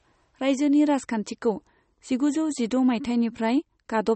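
The encoder behind this speech was likely starved of bits, with plainly audible MP3 compression throughout. Nothing survives above 8.4 kHz, which fits a rate near 32 kbps, so s sounds lose their top, and weak frequency lines flicker between frames, leaving a watery, swirling texture.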